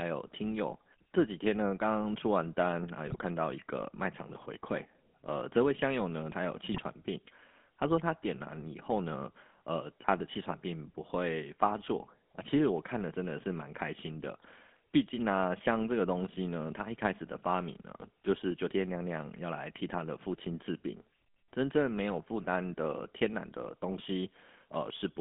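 Throughout, the speech has passed through the GSM full-rate codec. The codec models the vocal tract and drives that filter with a coarse excitation of regularly spaced pulses, keeping only every third excitation sample, at a rate that fits the 13 kbit/s full-rate mode. The line band runs from 250 Hz to 3.5 kHz, so the speech is thin and narrow. The pulse excitation gives it a plainly audible buzzy, gravelly roughness.

From 3.07 to 3.16 s and again from 6.72 to 6.79 s, GSM bit errors hit the link. Corrupted bits reached the decoder, so the filter, pitch or gain values it rebuilt were wrong frame after frame for the length of each burst. The result is a short patch of broken sound each time. The spectrum bends or the level jumps, and the speech turns briefly to squawks, pops and gargling before the decoder recovers.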